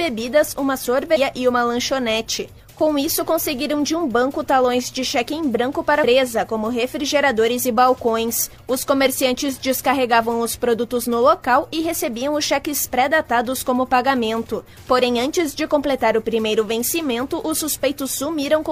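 At 1.12 s, running to 1.18 s, there is a short burst of damaged data in the compressed stream. For roughly 60 ms the decoder is handed corrupted bytes it cannot interpret as valid frames, so it loses frame sync and has to search forward for the next usable header. The result is a brief glitch, heard as a chirp, squawk, click or short hole, before normal decoding resumes.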